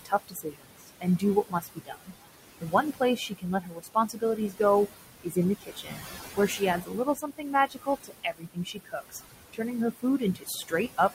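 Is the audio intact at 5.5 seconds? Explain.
No. From 5.22 to 6.03 s there is speech cut by the noise suppressor. It mistook part of the speech for background and pulled it down by as much as about 21 dB, so roughly half a second sounds swallowed and faint. The same moment also carries noise suppressor artifacts, present throughout. The suppressor lowers the room noise, which sits about 9 dB below the speech, by about 19 dB in the gaps, so the residue sinks between the words and rises under the speech.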